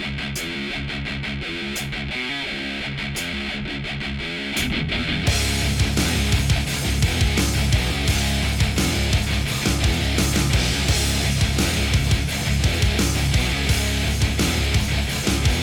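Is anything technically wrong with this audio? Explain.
No, there is nothing technically wrong here; no fault can be heard anywhere in the audio.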